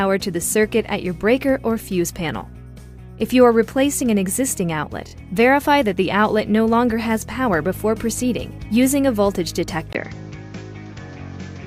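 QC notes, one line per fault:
5.07–5.12 s, repeated frames: A short stretch of audio plays again twice in quick succession, adding 48 ms. It is heard as a brief stutter. The repeat length fits a run of 14.7 ms compressed frames.
9.93 s to end, input switched to a poorer device: After a 20 ms gap, the sound turns duller, with nothing above 7.6 kHz. The level shifts by a few decibels, and a new, quiet background noise appears. A likely change to a narrower-band input explains this.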